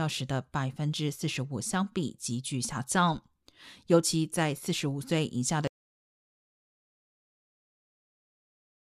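At 5.67 s the speech cuts off abruptly into silence, with no room tone, and stays silent through to the end, a span of about 3.2 s. This is an audio dropout to silence, likely from the input being lost while recording continued writing zeros.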